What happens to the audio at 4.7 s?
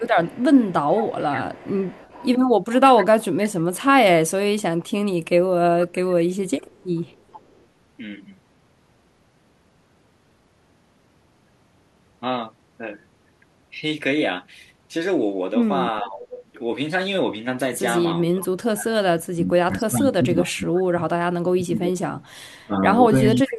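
Nothing goes wrong at 4.7 s; the speech carries on intact through that moment.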